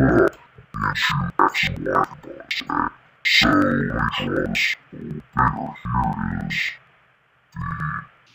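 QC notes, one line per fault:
Throughout: interleaved audio read as planar, 92.9 ms blocks (fits 4096 samples) split into half-speed channels, an octave down, doubled, choppy; spectrogram shows harmonics halved, 10.8 Hz block seams.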